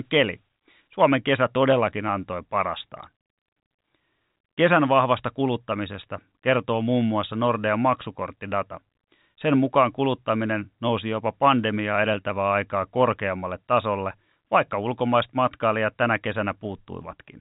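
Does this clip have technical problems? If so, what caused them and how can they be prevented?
No, no technical faults found.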